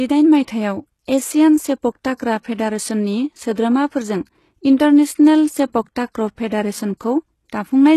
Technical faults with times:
0.00-7.97 HE-AAC compression
2.16-2.20 pre-echo

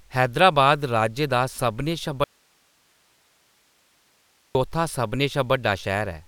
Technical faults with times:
2.24-4.55 audio dropout to a faint residue

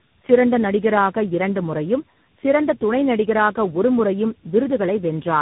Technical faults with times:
0.00-5.41 tandem speech coding

